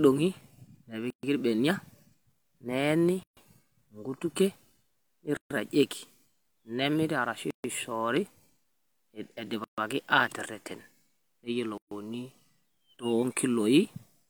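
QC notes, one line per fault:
1.10 to 1.23, 3.23 to 3.37, 5.37 to 5.51, 7.51 to 7.64, 9.64 to 9.78 and 11.78 to 11.91 s: gap at a join of encoded pieces. The speech was encoded in 2 s pieces and joined without trimming each run's start-up delay and final-frame padding, so a gap of about 130 to 136 ms cuts into continuous speech at each join, including right after "nemiri arashu". The codec smears the edges, so the silent part is shorter than the gap, and the speech resumes where it stopped.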